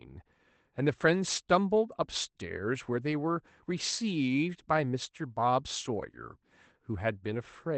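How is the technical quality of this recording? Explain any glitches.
No glitches can be heard.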